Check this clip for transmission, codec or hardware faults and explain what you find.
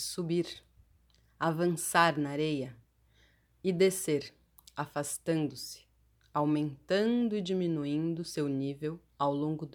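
Checking this clip turns up no faults to explain.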